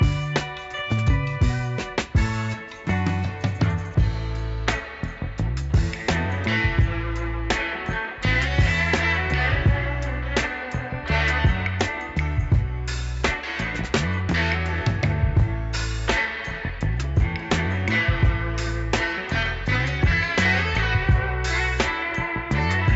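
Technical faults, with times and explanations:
Nothing stood out on listening to this clip.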